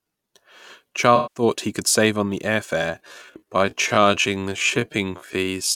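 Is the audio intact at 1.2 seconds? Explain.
No. AAC frame loss with concealment runs from 1.16 to 1.43 s, just before "he could save on". About 192 ms of frames went missing. The decoder filled the gap from the last good spectrum. That stretch sounds smeared, noisy or phasey.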